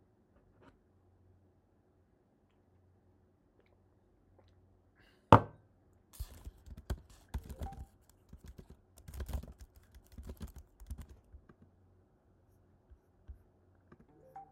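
No technical faults can be heard anywhere in the sound: the signal runs continuously, with nothing broken or damaged.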